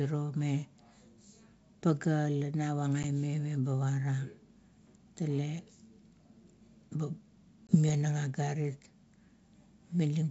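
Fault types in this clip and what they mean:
Packet loss on an ADPCM call: about one packet drops out near 3.03 s and a couple more near 7.67 s, leaving sharp gaps of 10 and 20 ms. The decoder's predictor and step size lose track, so the G.722 wideband speech comes back slightly distorted before settling.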